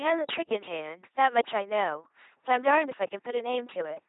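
The whole clip sounds like an LPC-10 vocoder, around 2.4 kbit/s. Speech becomes buzzy and robotic, each moment voiced or hissed, with nothing above 3.9 kHz.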